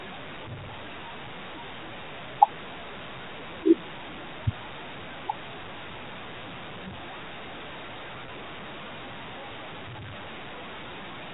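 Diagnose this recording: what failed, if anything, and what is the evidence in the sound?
Call processing: the noise suppressor cut speech across most of the clip, with soft consonants and word endings pulled down by up to about 18 dB. Unlike a level fault, only the quiet parts are turned down.

Network: packet loss with pitch repetition at 8.26 to 8.28 s. The receiver repeated the last pitch period across the 20 ms gap, giving a brief held buzz rather than a dropout's click or silence.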